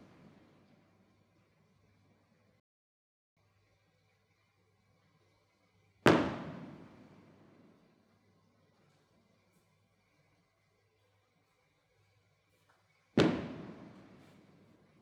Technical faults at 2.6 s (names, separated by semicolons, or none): playback stall